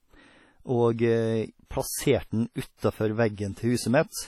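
Throughout, the speech rings and washes, with hiss breathing alongside it and nothing above 16.6 kHz. This is likely heavy WMA compression, consistent with a low bitrate near 32 kbps.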